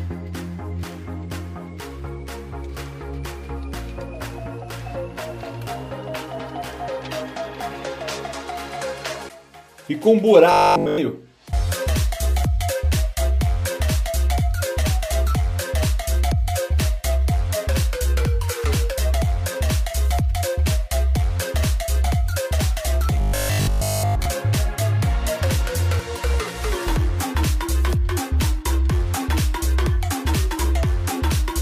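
From 10.52 to 10.98 s and again from 23.21 to 24.25 s, robotic sound from repeated short buffers: the audio entirely, then mostly, becomes one 20 ms slice looped, likely from late-arriving buffers. It is a rigid 50 Hz buzz, seen as stacked horizontal harmonics and an identical repeating waveform.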